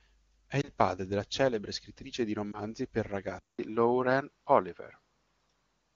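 At 0.61 to 0.69 s, just before "padre della celebre scrittrice", a single lost AMR speech frame of 20 ms failed its check. The AMR-WB decoder patched it by repeating its last pitch and vocal tract settings at reduced gain, which gives a brief dip or warble before the speech recovers. The same lost-frame concealment happens again at 2.51 to 2.58 s, right after "della celebre scrittrice di", with the same short dip.

At 3.39 s the input likely switched to a poorer device, which carries the rest of the clip. A silence of about 200 ms marks the switch. After it, nothing above 5.8 kHz is passed, so the speech sounds duller and narrower than the crisp wideband sound before. The level shifts by about 5 dB, and a faint new background noise sits far below the speech.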